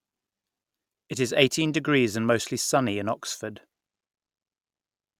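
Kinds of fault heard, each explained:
No kinds of fault are heard in the clip.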